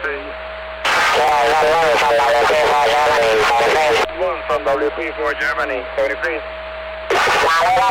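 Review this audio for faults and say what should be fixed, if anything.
A brief jumbled stutter at 1.24 to 1.29 s: chunks out of order, with one 11.6 ms block, apparently about three blocks late, creating three hard joins. Reorder buffers by sequence number or timestamp before playback or writing.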